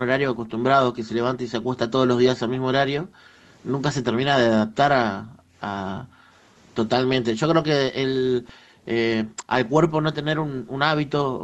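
From 0.0 to 3.44 s, 4.03 to 6.38 s, 7.06 to 7.39 s and 8.4 s to the end, the speech is chopped and dipped, as deep as about 40 dB. This is likely speech suppressed in double talk. The waveform shows collapsed stretches, and the spectrogram shows bands fading out.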